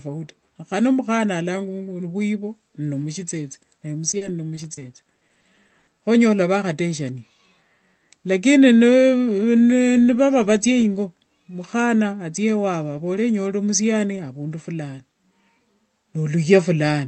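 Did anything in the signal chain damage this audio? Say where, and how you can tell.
Yes. Repeated packet loss (robotic sound) hits the speech from 4.11 to 5.89 s, a network-stage fault. Over that stretch about a dozen short holes, none longer than 80 ms, are patched by stretching the last received sound forward, so about a fifth of the span is synthetic fill. That fill gives the choppy texture, with fragments of speech missing where the concealment ran out of real audio to extend.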